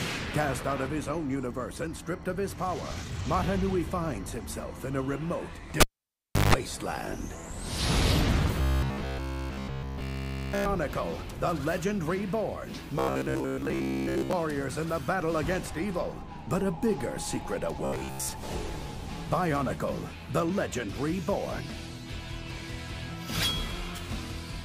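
At 5.80 s a cable is pulled and plugged in again, with the fault running to 6.54 s. A pop marks the disconnection, then the signal falls to near silence for about 0.68 s. During the dropout, a 50 Hz mains buzz lasting about 160 ms appears while only the tip makes contact, and a second pop follows when full contact restores the sound.

Robotic sound from repeated short buffers appears at 8.62 to 10.67 s, 12.99 to 14.33 s and 17.85 to 18.29 s. In each stretch the audio turns into a rigid, metallic buzz at a fixed 66.7 Hz that roughly tracks the underlying sound. The likely cause is late-arriving audio being covered by looping the last chunk, which fits a 15 ms buffer. In the first stretch essentially all of the audio is replaced by repeats, and in the later two most of it is.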